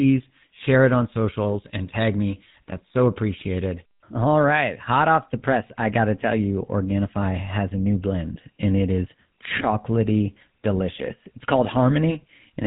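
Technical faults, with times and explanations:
Throughout, GSM full-rate codec: buzzy, gravelly speech with nothing above 3.9 kHz, from pulse-driven vocal-tract modelling at a rate that fits 13 kbps.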